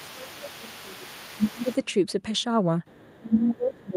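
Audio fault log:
0.00–1.70 s, speech suppressed in double talk: the talker's speech sinks by up to roughly 20 dB across most of this stretch, likely because the echo canceller mistook simultaneous talking for echo and turned both down.
0.00–1.77 s, other side's voice leaking through: a faint second voice sits about 25 dB under the speech, likely loudspeaker sound the echo canceller failed to fully remove from the microphone.
2.86–3.19 s, other side's voice leaking through: a brief, very quiet scrap of the far voice, about 35 dB below the speech, likely residual loudspeaker echo passing the canceller.
3.20–3.96 s, speech suppressed in double talk: the speech drops by up to roughly 25 dB through the end, likely the canceller again damping the near talker while both sides spoke.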